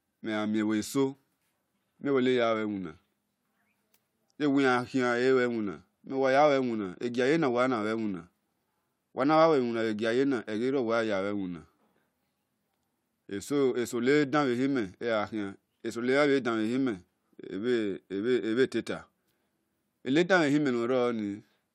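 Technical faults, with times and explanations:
No technical faults are audible in this speech recording.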